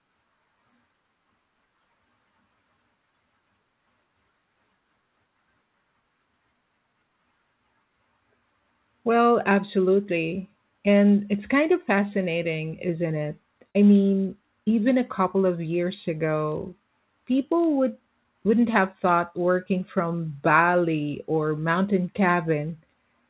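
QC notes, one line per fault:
13.70–13.77 s, burst of packet loss: a short run of speech failed to arrive. The receiver stretched the last sound for about 46 ms while fading it, then resumed roughly 40 ms further on, so a brief held smear precedes a small skip.
16.32–17.68 s, filter restarted on every block: the filter clears its memory at each block boundary, so every block opens with a small transient. These repeat 50 times per second, which fits 20 ms blocks, giving a 50 Hz buzz that follows the speech level.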